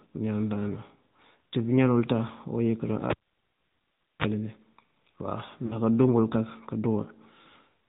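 The whole clip of speech runs through the AMR narrowband mobile codec. The band stops at 4 kHz, and the pulse-driven vocal tract model gives voicing a plainly audible buzzy, synthetic edge. This fits a mid-rate AMR-NB mode around 10.2 kbps.

At 3.10 s the cable is pulled and plugged in. A pop cuts the signal, and near silence follows for about 1.12 s. As the tip makes contact, a 47 ms burst of 50 Hz mains buzz sounds. A second pop brings the audio back at 4.27 s.

Between 5.66 and 5.76 s, lost AMR speech frames leave a 40 ms gap, which fits two lost 20 ms frames. The decoder filled it by repeating its last pitch and vocal tract settings at falling gain. The sound smears and dips briefly, then resumes weak or rough for a moment.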